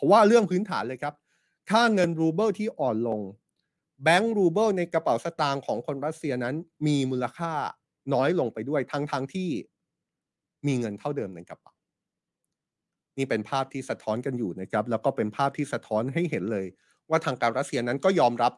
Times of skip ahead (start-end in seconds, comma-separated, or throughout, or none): none